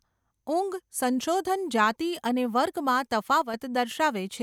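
A speech clip with one channel dropping out near the end, from 3.42 to 3.54 s. For about 0.12 s the level falls abruptly by about 6 dB and then snaps back. That drop is what you'd get once the stereo pair is summed to mono: material common to both sides halves in level, and anything that lived only in the lost side vanishes. The likely cause is one of the two channels briefly going dead upstream of the mono sum.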